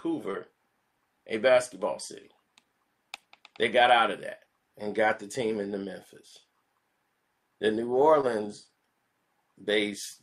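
At 0.31 to 0.35 s and again at 8.21 to 8.25 s, short concealed packet loss: about 20 ms went missing, and the receiver extrapolated the preceding sound to cover it, leaving a brief smear rather than a silent dropout's hard gap.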